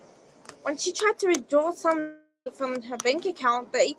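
At 1.99 s the speech stops and turns into a buzzy, fading continuation of the last sound. That tail thins out, leaving about 90 ms of near silence before the speech returns at 2.48 s. Roughly 460 ms of speech is simply gone. The audio resumes mid-flow rather than picking up where it broke. The likely cause is a long network dropout. The receiver stretched the last sound to cover the gap, then gave up.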